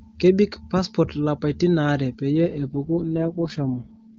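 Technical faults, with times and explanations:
2.35–4.18 s, AMR rate drop: from 2.35 s to the end, the speech turns rough, raspy and more synthetic. Bandwidth stays the same and there is no gap. The wideband codec is clean before this point. The change points to the network lowering the AMR-WB rate from around 23.85 kbit/s to 6.6 kbit/s on a weak link, spending the freed bits on error protection. That leaves too few bits for the vocal tract model and pulse excitation to describe the speech accurately.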